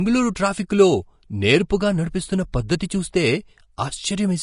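From start to finish the speech carries plainly audible Vorbis compression damage, likely from a low-bitrate encode, somewhere around 36 kbps. Nothing's left above about 10.6 kHz, and the treble that remains is quantised so coarsely it turns into grainy hiss, roughening tones and smearing attacks.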